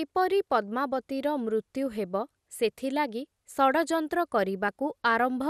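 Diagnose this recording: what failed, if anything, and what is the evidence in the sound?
The codec stage is where this recording failed, most likely through MP2 compression at a starved bitrate. The damage is plainly audible across the whole speech clip: the top end sounds dull and the speech carries a gurgling, granular roughness. Layer II divides the spectrum into 32 bands and shares out bits; short of bits, it shuts the upper bands off, lets others flicker, and quantises the rest coarsely. That fits a rate around 80 kbps.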